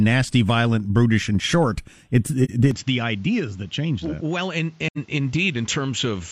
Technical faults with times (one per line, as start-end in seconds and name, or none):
2.44-2.50 AAC frame loss with muting
2.71-6.31 input switched to a poorer device
4.87-4.98 AAC frame loss with muting